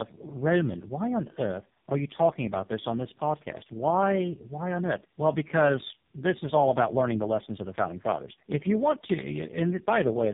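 It's a speech clip with tandem speech coding running the whole way through. The audio sounds like it went through three low-rate speech coders back to back, probably G.729A, then GSM full rate, then AMR-NB, with plain G.711 hops in between. Each stage decodes and re-encodes the previous coder's damage, so you get that stacked roughness, muffling and warble. Nothing survives above about 3.7 kHz either.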